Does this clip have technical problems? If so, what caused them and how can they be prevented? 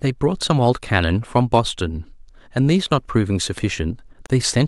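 Yes: a 34 ms gap at a join of encoded pieces, 4.26 to 4.30 s, from untrimmed encoder padding; unlike a dropout, speech resumes where it stopped. Trim encoder delay and end padding before joining, or encode the whole piece in one pass.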